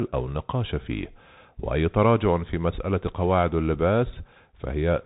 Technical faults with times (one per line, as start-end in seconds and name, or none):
0.00-5.05 Bluetooth CVSD headset codec